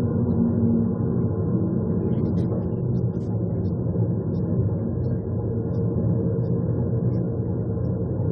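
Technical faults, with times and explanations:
Nothing technical jumps out in this audio; there's no fault to point to anywhere in it.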